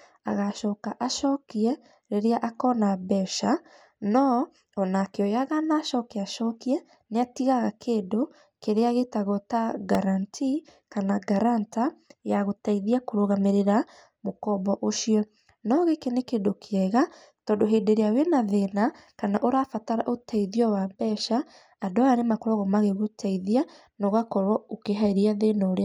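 At 9.95 s and again at 11.73 s the speech has a repeated buffer: playback ran short of new data and replayed a 1.45 ms segment, twice then once, which fits a 64-sample buffer. Each repeat is heard as a click or brief buzz rather than a stutter.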